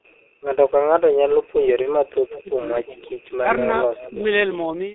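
Speech carried over a heavily damaged G.723.1 codec path. The sound is muffled and hoarse, with smeared consonants, consistent with a low-rate coder around 6.3 kbit/s. On a spectrogram, energy is confined to a band from roughly 250 Hz to 3.7 kHz, with coarse, blocky texture in place of fine harmonic detail. At 1.82 to 1.89 s, VoIP packet loss was concealed by the speech codec. The decoder filled the gap by extending its last pitch and filter state, producing a brief smear that fades in level. This fits a single lost 30 ms frame. It would appear as a short stretch of decaying, extrapolated sound with a dip in the waveform envelope. An echo leak likely occurs at 2.3 to 2.42 s and again at 2.86 to 3.2 s. A faint delayed copy of the speech returns about 0.36 s late, roughly 15 dB and 20 dB below it. On a spectrogram this shows as a weaker ghost of earlier harmonic patterns shifted in time. 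Between those, at 2.43 to 2.5 s, the speech is likely suppressed in double talk. The echo canceller pulled the level down by as much as roughly 15 dB for about 70 ms, visible as a sudden notch in the waveform envelope. The call microphone processing takes out the lowest bass, which is expected.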